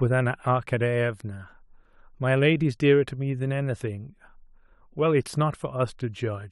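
No technical faults can be heard in the recording.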